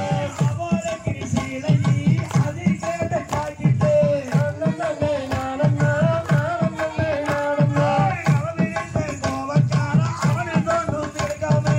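No technical faults are audible.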